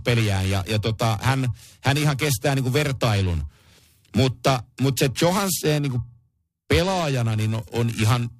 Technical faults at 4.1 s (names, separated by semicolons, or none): periodic clock jitter